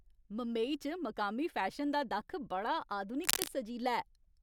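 A worn cable or connector was likely moved, making its contact resistance jump erratically. From 3.23 to 3.49 s, right after "फैशन दा दक्ख बड़ा", this cable scratch noise lays dense, uneven scratchy rustling over the speech, roughly as loud as the speech itself.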